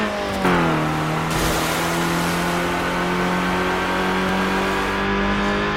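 At 4.29 s there is a block of digital silence lasting about 1.3 ms, a stretch short enough to fit a single 64-sample buffer that was likely never filled in time and went out as zeros. The audio drops straight to silence and returns with no fade, so the two hard edges merge into one sharp tick. On a waveform this shows as a brief flat line; a spectrogram shows a thin vertical broadband stripe.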